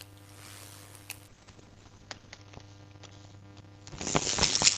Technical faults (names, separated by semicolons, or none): block size mismatch (padded); call bitrate drop